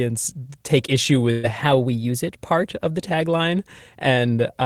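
Right after "take issue", from 1.31 to 1.46 s, there's a burst of packet loss. About 120 ms of audio never arrived, so the receiver stretched the last sound into a fading fill instead, and the speech picks up again further along.

Then from 1.64 to 2.65 s, ending just before "of the", everything runs about 6% fast and sits roughly 105 cents sharp, a bit over a semitone, before snapping back. That's likely a drift correction step, where clock-matching software jumped the playback rate.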